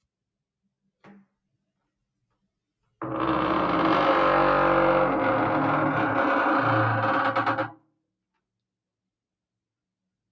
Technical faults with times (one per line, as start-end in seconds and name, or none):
7.67-8.01 sound cut by the noise suppressor